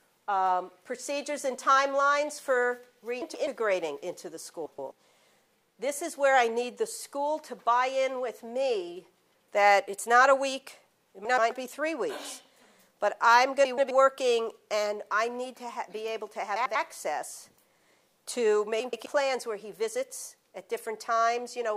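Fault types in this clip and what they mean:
Frames out of order: neighbouring blocks of 96 to 128 ms swap places six times. Each gives a garbled flutter.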